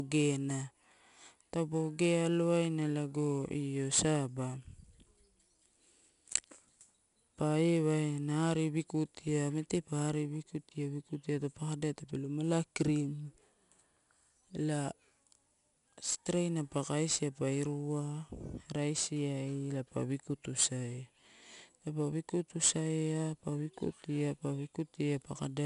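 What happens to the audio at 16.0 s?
4-bit ADPCM compression is present at 16.0 s, as throughout the clip. Each sample is stored as a coarse 4-bit step from a prediction, so the speech carries a gritty hiss that follows its level, roughened attacks, and nothing above 10.6 kHz.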